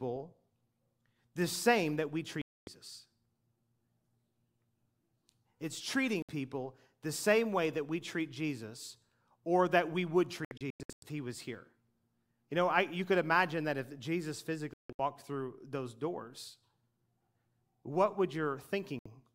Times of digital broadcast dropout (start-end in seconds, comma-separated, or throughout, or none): 2.41-2.68, 6.22-6.29, 10.45-11.03, 14.73-14.99, 18.99-19.06